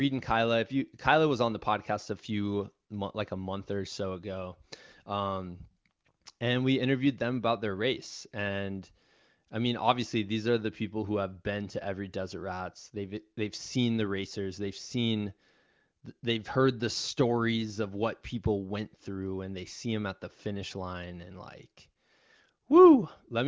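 No faults found in this speech: the band stops at 8 kHz as expected after call microphone processing, and the AMR wideband (HD Voice) coding, which fits a high rate of about 23 kbit/s, leaves at most faint traces.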